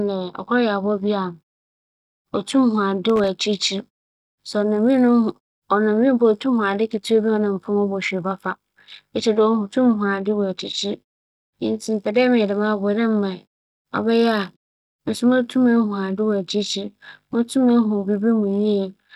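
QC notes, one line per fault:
3.09–3.28 s, loose connector crackle: a short, ragged burst of crackle and scratching lasting about 0.19 s, uneven rather than a single clean click. A worn or dirty contact in the signal path is shifting and repeatedly losing and regaining connection, so the audio is chopped on and off many times in quick succession, and any DC on the line turns each reconnection into a pop.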